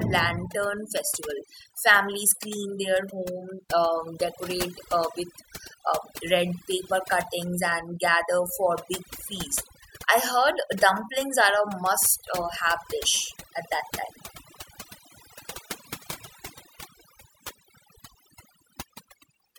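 Overdone noise removal runs through the whole speech clip. A noise reducer set far too aggressively clamps any frequency band near its noise estimate, so the background drops and breaks up into twinkling specks, and quieter voice components vanish.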